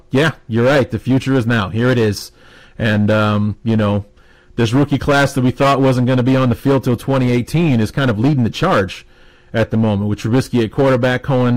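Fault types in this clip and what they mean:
Hard clipping: The speech is driven into some stage of the chain about 13 dB harder than it can pass, so every peak above its ceiling is sliced flat, and around a tenth of the samples end up pinned at that limit. Those squared-off tops throw energy into high harmonics that the original never had, so throughout the clip the louder syllables carry a harsh, buzzy fuzz rather than occasional crackle.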